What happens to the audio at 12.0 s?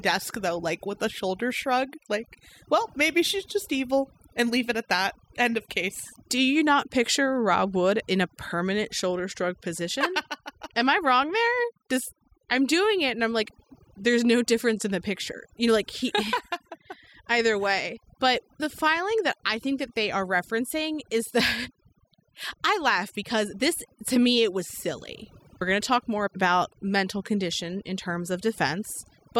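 At 12.0 s the speech is under overdone noise removal, which runs through the whole clip rather than starting or stopping there. A noise reduction stage set far too strong is pulling individual frequency bands down or out whenever they sit near its noise estimate, and the quieter parts of the voice are caught along with the noise. The gaps drop away and break up into twinkling specks.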